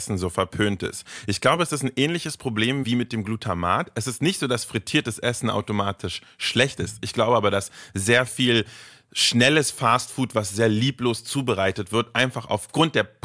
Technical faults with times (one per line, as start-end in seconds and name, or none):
none